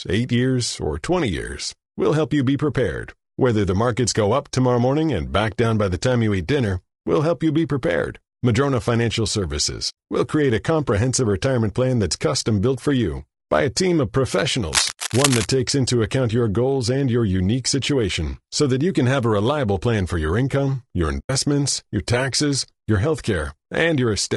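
The speech is encoded throughout with what is likely low-delay AAC compression at a low bitrate; its short frames resolve harmonics poorly, so the voice turns rough and grainy, with a thin, synthetic top.

AAC frame loss with muting, where dropped frames are decoded as silence, leaves soft-edged holes at 9.89 to 9.95 s, 14.91 to 14.97 s and 21.19 to 21.30 s.

From 14.73 to 15.52 s, cable scratch noise, likely from a moved worn connector, lays dense, uneven rustling bursts over the speech at about 5 dB below it.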